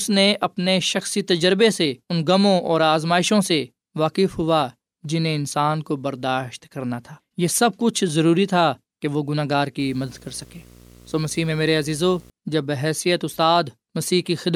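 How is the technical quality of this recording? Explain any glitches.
One fault stands out in the speech. From 9.80 to 12.30 s there is video or display buzz. A screen or video cable couples into the audio, adding a 60 Hz buzz with hash, well below the speech.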